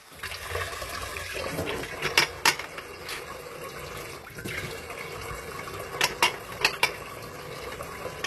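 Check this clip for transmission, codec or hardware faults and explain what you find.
One codec fault runs through the whole clip. HE-AAC compression, throughout: the treble appears rebuilt from copied lower bands rather than coded directly, making the upper range gritty and metallic, with nothing above 12.3 kHz. This likely comes from a low bitrate around 16 kbps.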